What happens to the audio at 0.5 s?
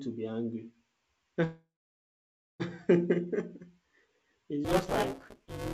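Nothing goes wrong at 0.5 s: the speech passes through intact, carried by a call path that sounds like a G.722 codec at 64 kbps, so nothing is heard above 8 kHz.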